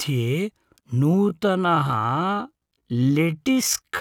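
A speech clip with a time-stretched section from 1.01 s to the end: the pace suddenly drops to about 0.59 of normal speed while the pitch holds steady, so the speech drags. The likely cause is software lengthening the audio by repeating short slices. On a spectrogram, harmonics keep their frequencies but stretch sideways; the waveform shows elongated syllable envelopes built from visibly repeated grains.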